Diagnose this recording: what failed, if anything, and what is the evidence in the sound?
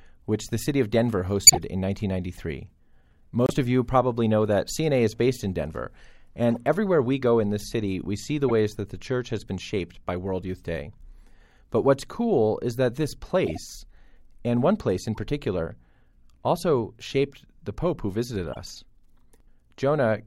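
The codec stage failed, with corrupt frames decoded at 1.47 to 1.57 s, 6.51 to 6.57 s, 13.46 to 13.58 s, 15.15 to 15.18 s and 18.53 to 18.57 s. Each is a short chirp or noise burst, loudest, at about -5 dBFS, at 1.47 s and faintest at 15.15 s. Damaged bits were decoded anyway, so energy landed at wrong frequencies for a few frames.

Corrupt frames were also muted at the codec stage. At 3.46 s the speech cuts abruptly to silence for 70 ms, then resumes on time. The decoder rejected the damaged data and the player filled the gap with silence. The length fits two lost frames.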